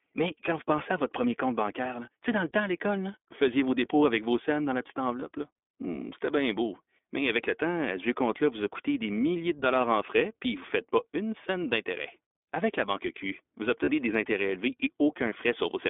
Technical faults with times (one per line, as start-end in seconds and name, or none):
0.00-15.89 iLBC codec
5.20-5.24 lost iLBC frames
13.84-13.88 lost iLBC frames